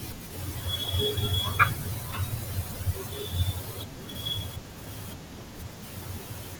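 At 3.81 to 3.84 s, a corrupt frame decoded produces a brief glitch near -25 dBFS: damaged bits misplaced energy, unlike concealment's muted or smoothed gap.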